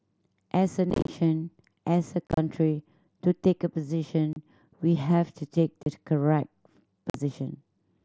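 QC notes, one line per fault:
0.90–1.09 s, 2.27–2.38 s, 4.33–4.36 s, 5.83–5.86 s, 7.10–7.15 s: unconcealed Bluetooth headset packet loss. Lost mSBC frames become abrupt holes in the speech, and the first two bursts scatter into choppy crackle.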